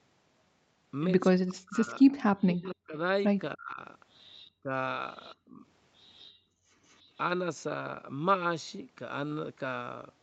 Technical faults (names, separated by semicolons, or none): speech suppressed in double talk; echo leak; background gated by the echo canceller